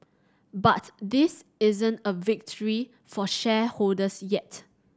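Nothing in the speech stood out as a technical fault on listening.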